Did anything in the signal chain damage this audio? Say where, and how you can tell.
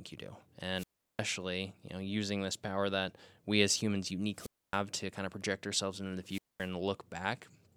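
Yes: wireless microphone squelch dropout at 0.75–1.23 s after "you do", 4.34–4.80 s after "that we as humans", and 6.23–6.71 s after "project ourselves into the". On the analogue radio link, the FM signal fades, hiss swells, then squelch mutes for 0.36, 0.27 and 0.22 s.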